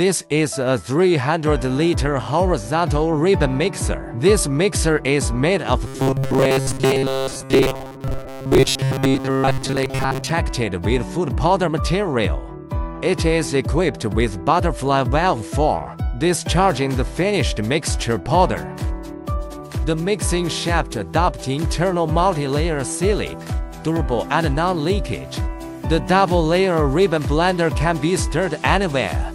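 A robotic sound from repeated short buffers runs from 5.87 to 10.31 s: a rigid, metallic 134 Hz buzz, likely from audio arriving too seldom, so a 7.5 ms chunk loops for most of the stretch. Spectrograms show evenly spaced 134 Hz harmonic lines, and waveforms show identical repeating cycles.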